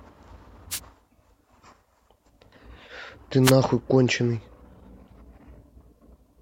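Wireless microphone noise hits occur from 0.70 to 0.80 s and again from 3.43 to 3.52 s, each lasting roughly a tenth of a second. Each is heard as a short burst of static. The analogue FM radio link from the microphone momentarily fades as reflected copies of its signal cancel the direct one. With too little signal reaching it, the receiver's own noise rises until the signal recovers.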